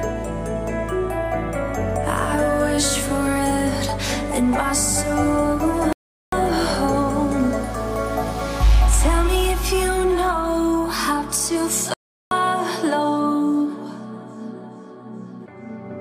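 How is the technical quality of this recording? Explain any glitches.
The recording has two glitches. Playback stalls at 5.93 to 6.33 s and 11.94 to 12.31 s: the sound halts for about 0.4 s each time, likely because the player ran short of data, then resumes.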